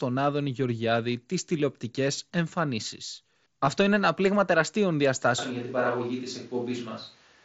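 A speech clip over a Bluetooth headset link, carried by the mSBC codec with its band ending at 8 kHz, has two faults. At 3.66 s, between "τις τηλεοπτικέ εμφανίσεις" and "είναι ένα πλήγμα τεραστίων", there is concealed Bluetooth headset packet loss: about 15 ms of audio, which fits two lost mSBC frames, was filled by repeating the closest-matching recent stretch of waveform. It is heard as the briefest buzzy smear. On a waveform it shows as a short run of near-identical repeated cycles. On a spectrogram it appears as a thin slice of evenly spaced harmonic lines with no change across it. From 5.39 s, right after "είναι ένα πλήγμα τεραστίων", to the end, the sound abruptly turns roomy and hollow, with thinner bass and a noise floor roughly 30 dB below the speech, while loudness stays about the same. This is likely a switch to a distant microphone. The spectrogram shows a sudden edge where low frequencies weaken and a steady wash fills the gaps between syllables. 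Reverberant tails blur each syllable's offset in the waveform.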